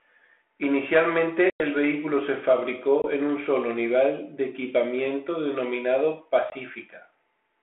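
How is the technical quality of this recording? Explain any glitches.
The speech is a narrowband telephone call with dropouts at three points. Each is packet loss on an ADPCM call. Lost packets were filled with silence, and the decoder's adaptive predictor and step size drifted away from the sender's. A hard-edged hole is followed by slightly distorted speech until it resyncs. The first, from 1.5 to 1.61 s before "el vehículo se", loses about 100 ms, several packets. Single-packet 20 ms gaps follow at 3.02 to 3.06 s before "en un solo nivel" and at 6.5 to 6.56 s after "nivel de equipamiento denominado". The light G.726 coding beneath fits 32 kbit/s.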